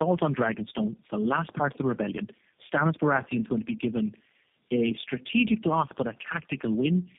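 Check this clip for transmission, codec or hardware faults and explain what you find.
The speech shows tandem speech coding throughout. It sounds like three low-rate speech codecs in a row, consistent with AMR-NB followed by two G.729A stages. Each one re-codes the previous one's damaged output, so the speech turns rough, muffled and warbly, with nothing above 3.7 kHz.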